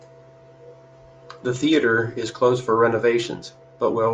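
A short bit of speech with nothing technically wrong to point at anywhere in it.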